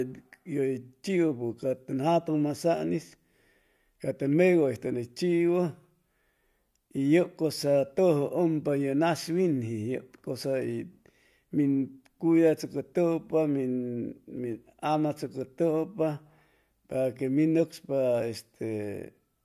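No technical faults detected.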